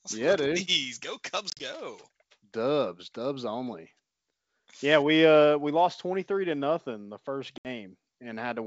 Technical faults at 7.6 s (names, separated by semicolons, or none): packet loss on an ADPCM call